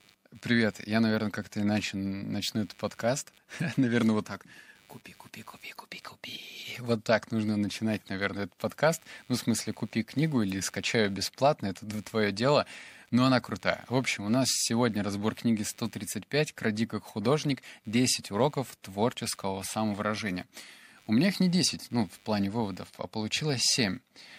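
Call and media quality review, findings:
Computer activity noise, present throughout. Buzz-like pulsing around 100 per second, sitting roughly 35 dB below the speech. It rises and falls with the host machine's load, not with the talker. Probable component: analog input stage sharing ground with the computer. Mechanism: processor, graphics or mouse load changes shift the shared ground, coupling switching pulses into the audio path.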